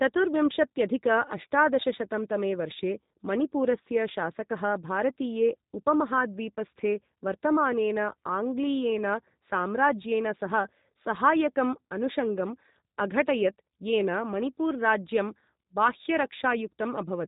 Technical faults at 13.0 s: G.729 codec

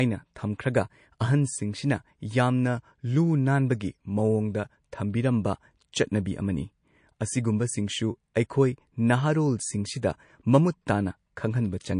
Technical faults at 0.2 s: MP3 compression

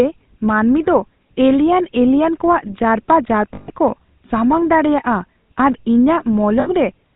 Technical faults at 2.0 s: GSM full-rate codec

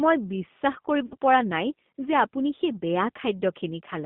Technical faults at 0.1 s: G.729 codec

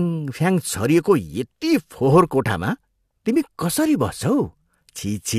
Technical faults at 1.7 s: none

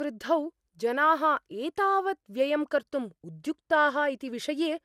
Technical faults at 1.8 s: generation loss

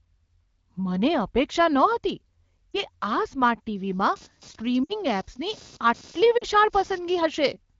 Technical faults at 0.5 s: none

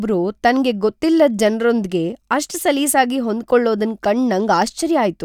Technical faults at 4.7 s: none

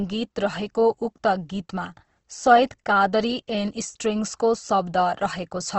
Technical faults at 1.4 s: Opus compression

